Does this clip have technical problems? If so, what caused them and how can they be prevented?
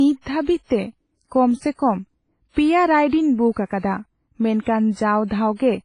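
Yes. Heavy codec damage runs through the whole speech clip: ringing, washy texture and hiss that breathes with the signal, with nothing above 10.4 kHz. That's likely WMA compression at a low bitrate, around 24 kbps, zeroing weak detail. Encode at a higher bitrate or keep a lossless master.

There's pre-echo at 3.66–3.70 s, 3.79–3.83 s and 4.62–4.66 s: a soft hiss smeared about 41 to 45 ms ahead of sharp onsets, because the codec spread noise across the whole block. Use an encoder with block switching or a higher bitrate.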